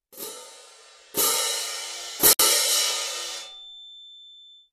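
At 2.33 s there's a 64 ms gap at a join of encoded pieces: leftover encoder padding leaves a soft-edged silence before the sound resumes.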